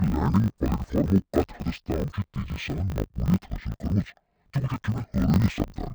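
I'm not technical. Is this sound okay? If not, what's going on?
No, this speech has a problem from start to finish: interleaved audio read as planar. The sound arrives in 20 ms chunks and gets scrambled, so it sounds an octave low, dull and robotic, buzzing 50 times a second.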